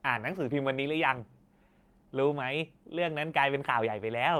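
Nothing technically wrong turns up in this bit of speech; it's carried by Opus voice compression at 24 kbps, and the light coding texture you can pick up is just what that codec does at that rate.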